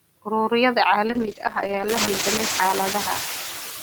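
From the start, noise suppressor artifacts are present: the suppressor pulls steady background noise down by about 19 dB between phrases. At 1.07 s a call bitrate drop begins, with the encoder falling from 48 to 9 kbps and holding its lowest rate for 1.45 s, so the speech turns coarse, watery or muffled through to the end. Around 2 s the room noise swells by about 16 dB to roughly 8 dB below the speech.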